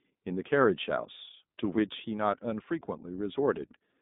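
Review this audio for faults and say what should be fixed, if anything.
The whole clip carries iLBC codec damage, plainly audible from start to finish. The line band runs from about 150 Hz to 3.7 kHz, with nothing above 3.8 kHz. The speech sounds slightly rough and synthetic, which fits the 15.2 kbps mode with 20 ms frames. Each frame's excitation is coded on its own. That separates it from plain telephone band-limiting, which dulls without graininess, and from packet loss, which leaves isolated gaps. To prevent this, record or transmit through a wideband codec, or keep an uncompressed capture.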